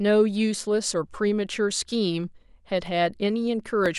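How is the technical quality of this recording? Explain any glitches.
The speech has a regular clicking glitch. From 0.86 s to 3.86 s, about four clicks fall once per second. This is likely clock drift buffer slips: two mismatched clocks, around 700 ppm apart, force a buffer to drop or repeat a few dozen samples each second, causing each click.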